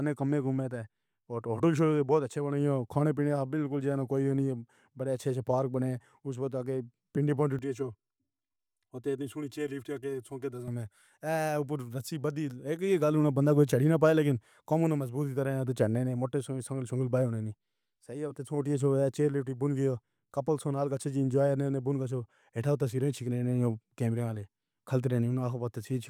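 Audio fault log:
7.59–10.68 s, channel delay (comb filtering): just after "وخت اڳوں پنڈی پونڈی", the speech turns hollow and phasey for about three seconds. One channel arrives roughly 3 ms late, and when the two are summed to mono, the shared content cancels at evenly spaced frequencies. The first notch falls near 150 Hz, and further notches repeat up the spectrum, so the speech loses body and takes on a thin, tube-like colour.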